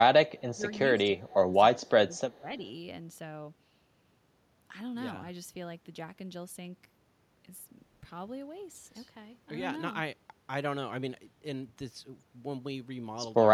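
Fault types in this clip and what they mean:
Echo leak: A faint, delayed copy of the speech trails the original by about 268 ms, sitting roughly 35 dB below it. It appears as a low ghost from 0.28 to 0.78 s and as brief scraps at 1.18 to 1.24 s and 2.13 to 2.20 s. The likely cause is a far end on loudspeaker whose echo canceller let part of the returning signal through, sending it back down the line.
Speech suppressed in double talk: The speech dips in level and thins out in patches, from 0.40 to 0.63 s and 0.81 to 1.54 s, dropping by around 15 dB at its deepest, then again from 1.74 to 2.63 s by around 10 dB. The likely cause is both sides talking at once, so an echo canceller could not tell this talker apart from loudspeaker echo and attenuated everything together while the other side spoke.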